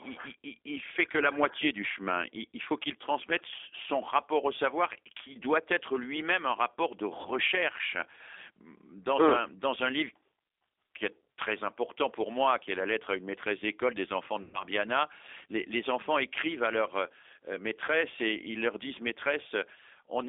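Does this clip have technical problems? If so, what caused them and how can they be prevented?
Yes. The whole thing runs through the G.729 codec. The band sits between 300 Hz and 3.6 kHz, and the speech has that rough, slightly synthetic edge you get when it's rebuilt from a filter, pitch predictor and a few pulses, which fits an 8 kbit/s call. Using a wideband codec like G.722 or Opus with enough bitrate would avoid it.

There's also VoIP packet loss concealed by the speech codec. It hits at 5.32–5.38 s right after "son rapport au savoir", at 7.22–7.30 s, and at 14.42–14.63 s after "maîtresse d'école des enfants", which is the longest, at about 120 ms, consistent with four packets in a row. The last is at 17.85–17.90 s, just before "et ils leur disent". Each gap gets filled by the decoder stretching the last sound out and fading it, and it stays a bit smeared for a moment after. A steadier network path with QoS priority for voice, a jitter buffer, or forward error correction would keep those drops from happening.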